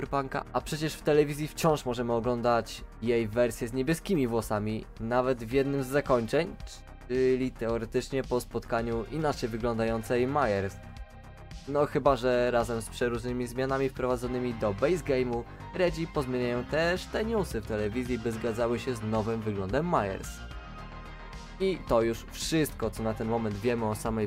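Nothing technically wrong turns up anywhere in this audio, so there's really nothing to flag here.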